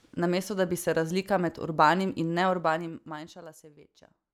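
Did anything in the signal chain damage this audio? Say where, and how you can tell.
Yes. Zipper noise appears at the gain stage handling the speech buffers, from 2.42 to 3.62 s, just after "razlika med urbanim in". The level falls by roughly 20 dB in audible 2 dB jumps, about ten per second, each leaving a small click, so a ticking rides on the voice while it drops. An unsmoothed gain change per block causes this. A proper fader move glides without ticks.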